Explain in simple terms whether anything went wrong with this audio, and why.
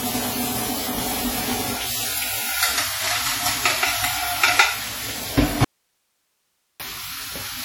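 Two things went wrong. Throughout the clip there is WMA compression damage, likely from an early Windows Media Audio encoder set to a low quality level. This kind of codec stores the sound in fairly long blocks, so its errors smear across tens of milliseconds. The sound comes out ringing and washy, with a hiss that swells and fades as the sound itself gets louder and quieter, and quieter details are simply dropped.

The second fault is an audio dropout to a faint residue, from 5.65 to 6.80 seconds, lasting a little over a second. The sound cuts out abruptly rather than fading, and for that stretch only a faint hiss remains, far below the normal level. That pattern points to the wanted signal likely being lost upstream while the rest of the chain kept running and passing its own background noise. The sound then snaps back just as suddenly.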